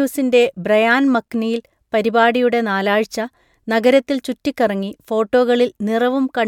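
No faults can be heard.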